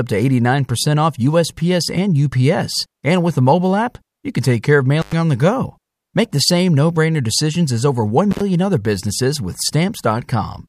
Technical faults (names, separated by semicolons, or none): intermittent contact